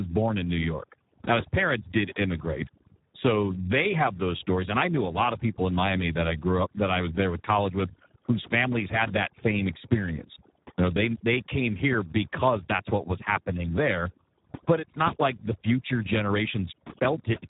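From start to finish the speech carries overdone noise removal. The noise reduction was pushed far too hard: every frequency band that sits close to the estimated noise floor is pulled right down or cut out, and the softer parts of the speech go with it. Between phrases the background falls to near silence broken by twinkling specks, and the speech itself loses its low-level detail.

Throughout, the audio also bears heavy Speex codec damage. Speex is a CELP coder built for narrow voice links, and here it runs at about 8 kbps. With so few bits to describe the excitation, the speech turns noisy, hoarse and at worst robotic. Nothing sounds above 3.8 kHz, so the band is narrowed and the top of the speech is gone.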